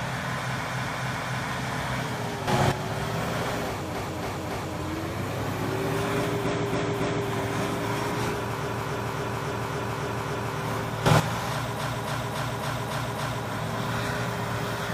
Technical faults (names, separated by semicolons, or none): repeated frames; sudden gain jump